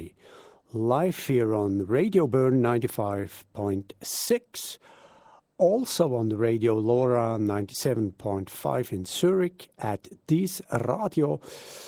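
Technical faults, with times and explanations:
Throughout, Opus voice compression: the speech has that hoarse, buzzy, faintly robotic edge of a low-rate voice codec, which fits something around 16 kbps. The lower band is handled by a linear-prediction coder that rebuilds the voice from a coarsely coded excitation, so detail gets roughened. The top end, above 8 kHz, is carried by a thin transform layer in 20 ms frames.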